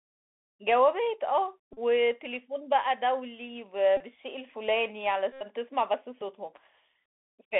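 A speech recording carried over a Bluetooth headset link using the CVSD headset codec, which fits a 64 kbps one-bit delta stream. The band runs only from about 250 Hz to 3.5 kHz. Loud high consonants outrun the adaptive step and turn scratchy, and a granular hiss sits under the voice. That grit and step-overload distortion set it apart from the cleaner dullness of an ordinary narrowband phone codec. Bluetooth headset packet repeats occur at 1.73 to 1.79 s, 3.97 to 4.02 s and 5.33 to 5.46 s. Each is a steady buzz near 267 Hz rather than a silent gap, because the last packet is decoded again every 3.75 ms. The longest run points to about 22 lost packets.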